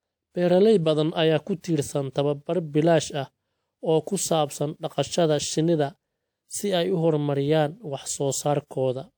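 A short hiss rises from 1.61 to 1.64 s, between "badan ayaa ku" and "tiirsan tababar bilaash ah", and the next attack lands soft and smeared. This is pre-echo: the codec sized its block's quantisation noise for the loud onset, spilling 35 ms of it beforehand.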